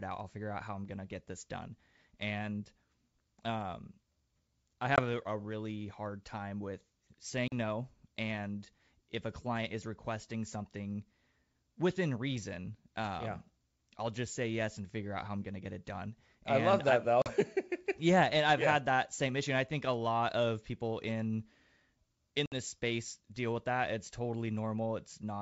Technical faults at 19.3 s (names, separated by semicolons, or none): none